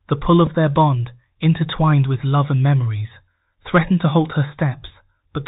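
Throughout, the speech passes through the Bluetooth CVSD headset codec, which fits a 64 kbps one-bit stream. Nothing above 4 kHz survives, s sounds turn scratchy, and granular hiss sits beneath. At 0.47 s, just before "their bond intertwined with", a Bluetooth headset packet was repeated: about 3.8 ms of lost audio, consistent with one dropped packet, was replaced by the previous packet, leaving a small tick.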